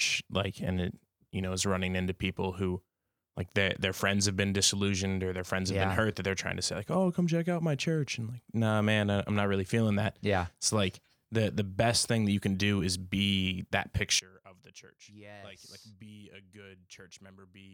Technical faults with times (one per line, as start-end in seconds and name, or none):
14.19-17.73 one channel inverted